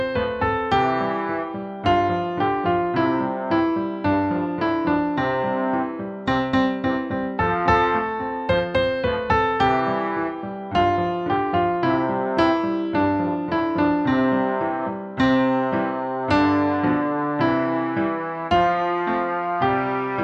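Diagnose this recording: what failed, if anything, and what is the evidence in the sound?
Nothing in the signal chain failed; no stage shows a fault anywhere in the audio.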